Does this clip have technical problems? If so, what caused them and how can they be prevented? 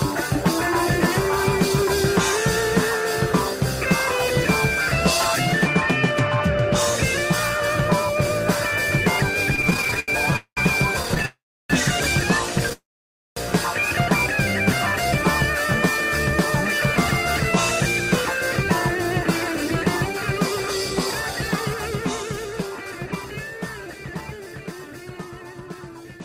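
Yes, there are three kinds of problem.

Repeated stalls (stutter) occur at 9.55–10.36 s and 11.03–11.26 s. In the first span the sound breaks 17 times, with about 249 ms filled in and the longest hold 81 ms, so roughly 31% of that stretch is concealment. The second span has 7 shorter breaks, none over 13 ms and 68 ms in total. Packets were arriving more slowly than playback consumed them, so the jitter buffer kept running dry. Each time, the receiver stretched the last sound until more arrived, so nothing is lost but the sound drags. A larger adaptive jitter buffer and a steadier network path would prevent this.

Call audio freezes occur at 10.36–10.59 s, 11.26–11.72 s and 12.73–13.38 s. In each one the last sound is held and fades, then turns to silence for about 100 ms, 320 ms and 550 ms. The sound then resumes where it stopped, about 204 ms, 440 ms and 638 ms later than it should have. 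The likely cause is packets being held up in transit until the jitter buffer emptied. Reducing network congestion, or giving voice traffic priority, would prevent these freezes.

Jitter buffer speed-up runs from 18.01 s to 26.19 s. Over that stretch the sound plays at about 107% speed with its pitch unchanged, so it sounds hurried. Delayed audio built up in the buffer, and the receiver then trimmed many tiny pitch-period slices to recover about half a second of excess delay. Slower, gentler buffer shrinking, or avoiding the preceding delay build-up, would prevent the hurried stretch.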